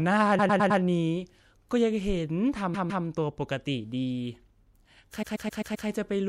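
Repeated frames at 0.38–0.80 s, 2.73–3.05 s and 5.21–5.87 s: a short block of compressed speech, about 105 ms, 157 ms and 131 ms long, is decoded again and again (4, 2 and 5 extra plays), producing a mechanical stutter and stretching the clip by 0.42 s, 0.31 s and 0.65 s.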